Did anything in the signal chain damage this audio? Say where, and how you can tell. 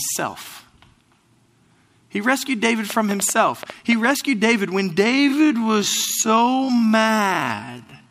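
Yes. A train of clicks runs from 2.90 to 4.12 s, roughly ten irregular pops at about 7.5 per second, peaking about 10 dB above the speech. These are likely interference at the interface or wiring. Because they sit on top of continuous audio rather than gapping it, they are not dropouts.

A time-stretched section runs from 5.02 s to the end, slowed to about half speed (0.51×). This is likely processing software repeating short fragments. Unlike a slow playback clock, it leaves the pitch unchanged.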